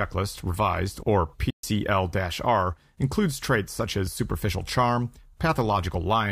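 At 1.50 s, right after "revised or", the speech halts in a playback stall and stays silent until 1.63 s, a gap of about 129 ms. The likely cause is the player running out of data or being blocked. Unlike a brief dropout, it is a sustained silence long enough to break the flow.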